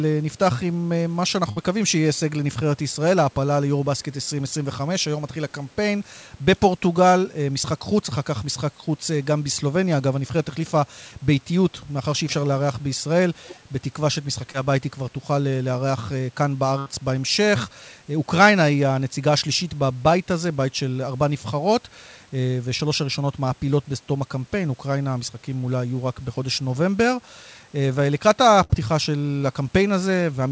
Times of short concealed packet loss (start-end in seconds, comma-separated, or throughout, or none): 14.52-14.55, 22.78-22.80